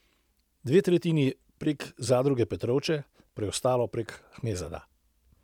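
No technical faults can be heard anywhere in the speech, and the signal holds steady without any break in continuity or change in level.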